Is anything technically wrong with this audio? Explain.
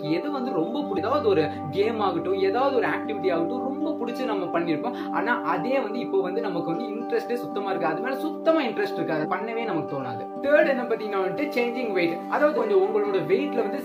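Yes. Damaged data in a compressed stream occurs three times: 0.93–0.98 s, 9.20–9.26 s and 12.54–12.59 s. Corrupted bytes make the decoder misread frames and lose sync until it finds the next header, so each event is a brief chirp, squawk, click or short hole. On a spectrogram it appears as a narrow smeared, garbled block, and on the waveform as an abrupt discontinuity.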